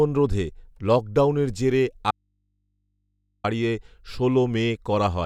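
A speech clip with an audio dropout to a faint residue from 2.11 to 3.44 s, straight after "রোধে লকডাউনের জেরে": the signal vanishes abruptly for about 1.33 s and only a low mains hum remains, roughly 50 dB below the speech. The likely cause is a break upstream while the input stayed open and picked up hum. On a waveform the envelope collapses to a near-flat line; a spectrogram shows the speech bands cut off sharply, leaving only thin horizontal hum lines.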